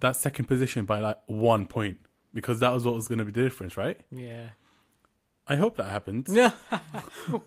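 One packet was lost and rebuilt from the next packet's low-bitrate error-correction copy at 1.57 to 1.59 s, between "second position by like" and "point because that was", leaving 20 ms briefly rougher and noisier without a gap.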